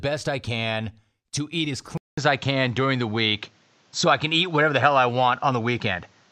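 Input switched to a poorer device, from 1.98 s to the end of the clip. The speech drops out for about 200 ms, then returns with nothing above 7.7 kHz, a level shift of around 5 dB and a new background noise floor roughly 40 dB below the speech. The most likely cause is the recording system changing its input mid-take to a different microphone or a headset's call profile, which has a narrower band and its own tone, gain and noise.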